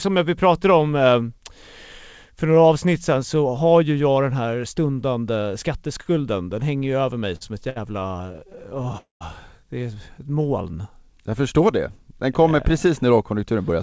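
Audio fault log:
7.36–8.96 s, repeated stalls (stutter): the speech halts about twenty times in this 1.6 s stretch, each halt patched by stretching out the last sound before playback resumes. About 319 ms is filled in total, roughly a fifth of the span, with the longest hold at 61 ms. Nothing is dropped, but delivery judders and drags. A spectrogram shows many short smeared, flattened slices interrupting the normal texture. The waveform shows repeated little plateaus of near-identical cycles.
8.98–9.23 s, call audio freeze: the sound stops for 228 ms. It starts as a brief continued tone that fades, then goes silent for about 140 ms before the speech picks up exactly where it left off. The likely cause is packets held up in transit, emptying the jitter buffer so the receiver had to bridge the hole. This pushes everything after it 228 ms later. On a spectrogram there is a fading smear followed by a blank column. 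The waveform tapers to a flat line.
10.19–11.42 s, jitter buffer slow-down: the receiver builds up its reserve by repeating single pitch periods and slivers of pauses, adding 128 ms over about 1.2 s. The speech plays at 90 % speed with unchanged pitch, so sounds are drawn out. A spectrogram shows harmonics at their normal spacing but syllables visibly elongated. The waveform shows runs of duplicated cycles and longer pauses than the surrounding talk.
13.31–13.82 s, jitter buffer speed-up: in the last half-second the receiver trims surplus buffered audio by cutting out short pieces one or a few pitch periods long, about 50 ms altogether. The speech runs at 108 % speed at the same pitch and sounds hurried up to the end of the clip. A spectrogram shows compressed syllables with intact harmonic spacing. The waveform shows small splice points where cycles were removed.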